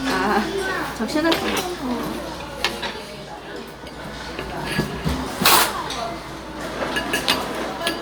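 A recording of everyday sounds, with nothing technically wrong.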